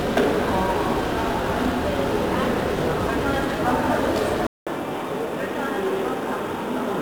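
From the very start the whole clip carries 1-bit DFPWM compression, and it's heavy. Each sample gets a single bit that just nudges an adaptive level up or down, so the waveform is only roughly tracked and the error spreads out as broadband noise. You hear it as a constant fuzzy, crackly grit over everything, with the top end smothered in hiss. The density of that grain fits a stream of around 48 kbps.

At about 4.47 s there's a gap of roughly 200 ms, and when the sound comes back it's narrower and a little quieter. Nothing gets through above 3.8 kHz, so it turns dull and boxy, and a faint new background noise sits well under the signal. That pattern points to the input switching to a poorer device, likely a different microphone or a headset's call profile, and it stays that way through to the end.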